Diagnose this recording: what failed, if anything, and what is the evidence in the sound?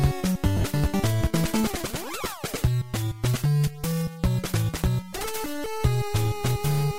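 The failure is in the wireless link: lost LE Audio frames, concealed by the LC3 decoder. Between 0.57 and 0.65 s the sound breaks up into a brief noisy smear. About 52 ms went missing, scattered across roughly 75 ms, with the longest gap around 40 ms. That fits several 7.5 ms LC3 frames dropping out. For each gap, the decoder replays the last good spectrum with scrambled signs, so tones lose their focus and turn hissy until real frames arrive again. The light codec coloring is just the normal lossy compression.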